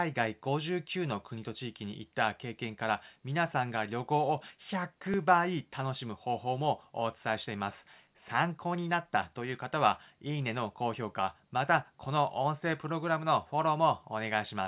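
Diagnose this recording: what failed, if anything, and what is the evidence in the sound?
At 5.14 s the speech skips ahead about 10 ms, likely a dropped buffer (overrun) in the driver: samples were overwritten before being read and the ends joined directly.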